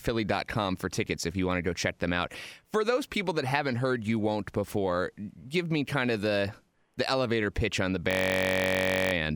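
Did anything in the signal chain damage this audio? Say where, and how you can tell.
Yes. A system hang loop at the driver or buffer stage runs from 8.11 to 9.13 s. One 21.33 ms slice repeats 48 times as a steady 46.9 Hz buzz, which fits a 1024-sample ring buffer replaying while the host froze. The waveform shows identical blocks, and the spectrogram shows static harmonics 46.9 Hz apart.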